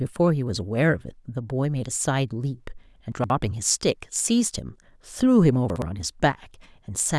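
At 3.12 to 3.3 s and again at 5.7 to 5.82 s, chunks play out of order: a 60 ms chunk arrives late and lands after its successors, producing a jumbled moment. Unlike a dropout, no sound is lost.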